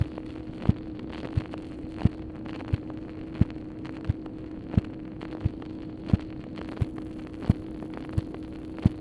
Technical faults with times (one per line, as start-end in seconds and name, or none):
6.68-9.00 resampler restarted on every block